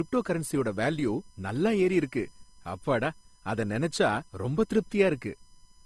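Running through the whole clip is USB whine: a steady, fixed-pitch tone built on 1 kHz and its multiples, loudest at 5 kHz and roughly 35 dB below the speech. The 1 kHz spacing separates it from mains hum, whose harmonics would sit on 50 or 60 Hz.

Also present throughout is a hard ceiling with nothing above 12.3 kHz, along with two different kinds of coding smear heard together. This is likely transcoding between lossy codecs, an AAC stage followed by Opus at a low rate, rather than a single codec pass.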